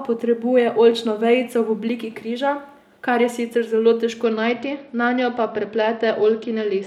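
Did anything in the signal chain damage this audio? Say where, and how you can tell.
Yes, at the Bluetooth codec. Right after "kar je sicer zelo", at 4.24 s, the speech goes dull and gritty until the end at 6.87 s. That's an SBC bit pool drop: a congested link starved the top sub-bands and coarsened the rest.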